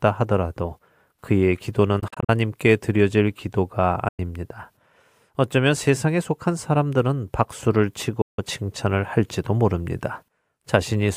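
Audio packets likely failed to reach the Bluetooth receiver in time and were discarded. These Bluetooth dropouts appear as a stutter of short silent holes from 2.00 to 2.29 s, then gaps at 4.08 to 4.19 s and 8.22 to 8.39 s. Each time the speech resumes further on, as though it had kept playing.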